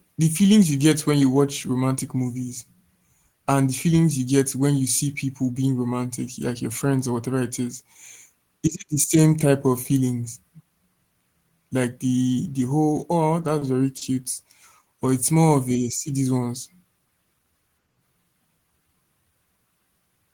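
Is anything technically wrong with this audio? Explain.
Yes. Short stalls from a late packet occur at 13.58–13.63 s, just after "the the whole oh", and at 13.97–14.03 s. Each time the jitter buffer ran dry and the last sound was stretched by 30 ms and 40 ms until the packet arrived, causing a brief hold with a slight buzz or dip.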